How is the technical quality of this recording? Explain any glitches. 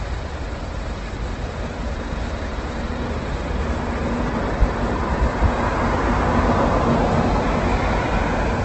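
The technical quality is poor throughout, with heavy codec damage. Opus compression in its music mode is the likely cause: detail turns grainy and rough, nothing is present above 8.2 kHz, and the damage fits a low bitrate of around 12 kbps. Running out of bits, the encoder fills bands with folded or noise-like content, so the sound loses its clean texture. A spectrogram would show a hard ceiling at 8.2 kHz with smeared, speckled energy below it.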